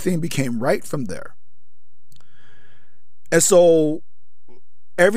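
For the whole of the speech, a DC offset of about -26 dBFS moves the waveform off its zero line, wasting headroom. Unlike mains hum or rumble, it never oscillates, so nothing is heard; it appears only as steady energy at 0 Hz.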